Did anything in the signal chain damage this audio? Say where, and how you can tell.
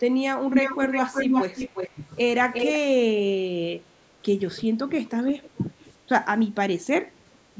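Yes. Echo leak in call processing at 0.47–1.97, 2.53–2.74 and 5.29–5.48 s: a distinct copy trailing 354 ms, then 423 ms behind, unlike diffuse reverb, likely uncancelled loudspeaker pickup.

Speech suppressed in double talk at 1.94–2.01, 2.78–3.09, 3.69–4.14, 4.66–6.03 and 6.51–7.42 s: steep level dips, not packet-loss gaps, likely the canceller ducking both talkers.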